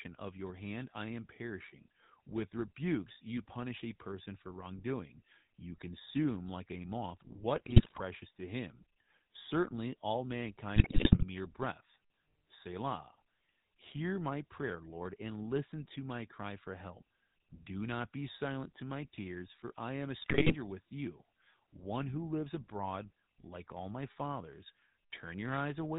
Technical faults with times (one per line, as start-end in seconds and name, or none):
0.00-25.98 GSM full-rate codec
7.56-8.01 GSM bit errors
10.76-11.25 GSM bit errors
20.22-20.55 GSM bit errors